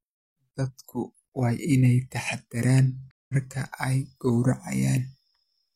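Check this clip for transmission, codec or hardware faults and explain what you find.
Two faults are present in this speech.

A block size mismatch (truncated) runs throughout. One stage writes longer blocks than the next reads, so each block's tail is dropped. This produces a steady 43.1 Hz buzz, which fits 1024-sample blocks. Speed and pitch stay essentially normal.

A stream reconnect occurs from 3.11 to 3.34 s, right after "waa inay taxaddaraan". The connection broke and a fresh decoder started mid-stream. About 180 ms of silence follows. The speech resumes roughly 150 ms further on, so a short stretch is skipped.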